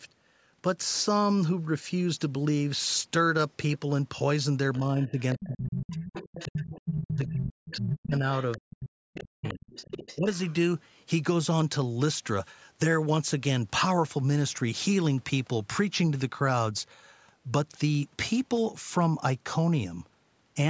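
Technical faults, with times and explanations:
4.74 to 7.78 s and 8.39 to 10.53 s, other side's voice leaking through: a second, fainter voice sits under the talker, roughly 10 dB below the speech in the first stretch and roughly 15 dB below in the second. It is likely loudspeaker sound picked up by the microphone that the echo canceller failed to remove. Unlike crosstalk or a background conversation, it appears only in these stretches, alongside the dips in the talker's own voice.
4.79 to 10.28 s, speech suppressed in double talk: while the leaked voice is present, the talker's speech repeatedly sinks or drops out, with the deepest cuts around 40 dB down and about 3 s affected in total. The likely cause is an echo canceller that could not tell the talker from the echo and turned everything down. Unlike network dropouts, the cuts track the overlap with the other voice rather than falling at random.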